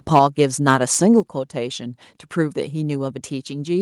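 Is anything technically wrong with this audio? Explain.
Yes. The speech has two related faults, and they happen twice.

Microphone overload occurs from 0.15 to 0.42 s and again from 0.68 to 1.19 s. The loudest syllables sound harsh and crackly, with flattened tops. The input volume was likely set too high, so peaks ran past the converter's ceiling, by about 4 dB and then about 6 dB. The waveform is cut off there. Only a small share of samples is affected, so the crackle rides on the peaks.

The microphone volume is stepped down at 0.19 s and again at 1.2 s. Voice and background both drop in level at once, by about 3 dB and then about 6 dB. Each drop follows the onset or end of a distorted stretch. This is likely the call software reacting to the clipping and lowering the device's input gain in a single step, rather than fading it gradually.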